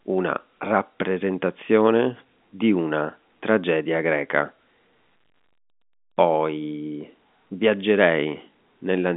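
Nothing stood out on listening to this speech clip, which comes through a narrow telephone-style band with nothing audible above about 3.8 kHz.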